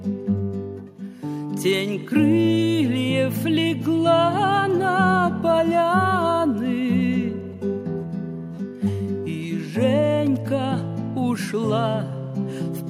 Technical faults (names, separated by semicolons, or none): none